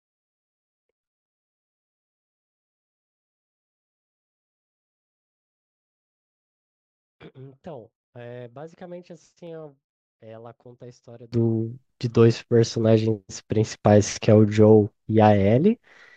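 From the start to 11.32 s, one stereo channel has most likely been inverted in polarity, a one channel inverted fault, so when the two channels are summed to mono the speech common to both cancels. The centred voice and its low end drop by about 26 dB, leaving only a faint residue of whatever differs between the channels. At 11.32 s the full, solid speech returns.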